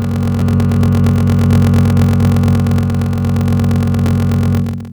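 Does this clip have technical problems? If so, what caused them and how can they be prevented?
Yes. A block size mismatch (padded) runs throughout: shorter written blocks are zero-filled to 1024 samples, producing a 43.1 Hz buzz and slowing the music to 0.861 times its speed at roughly normal pitch. Prevent it by making each stage's write block size match the next stage's read size.

Damaged data in a compressed stream causes brief blips at 0.41 s and 4.07 s, where the decoder misreads corrupted frames and resynchronises at the next header. Prevent it by verifying the stream's integrity in transfer and storage.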